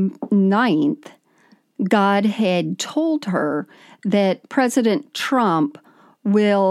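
Speech recording, no technical faults audible at any point.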